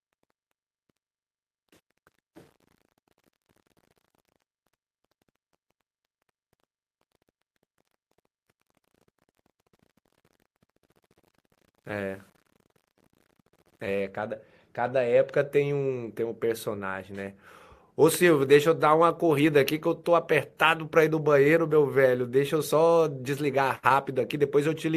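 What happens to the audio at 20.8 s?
Nothing goes wrong at 20.8 s; the audio is intact there, with no dropout, click, distortion or other fault at that moment.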